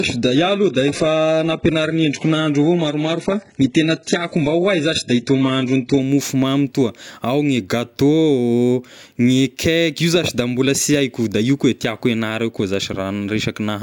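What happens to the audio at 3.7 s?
At 3.7 s the speech sounds thin and smeared, with nothing above about 11.1 kHz and stronger codec artefacts. This is an adaptive stream starting at a low bitrate, roughly 12 kbit/s, from 0.0 to 6.0 s. Quality then jumps cleanly, with no gap, just before "mofomamy toa ao gne".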